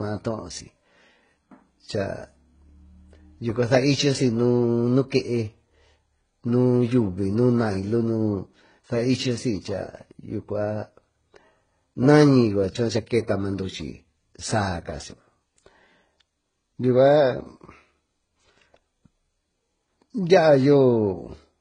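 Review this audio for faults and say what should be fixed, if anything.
Throughout the speech, nothing is heard above 9.7 kHz, and two different sets of coding artefacts sit together. The likely cause is transcoding between lossy codecs. The sound points to a very low-rate HE-AAC pass, then AAC-LC near 32 kbit/s, with the second encoder spending bits on the first one's damage. To prevent it, encode once, directly from the original uncompressed source.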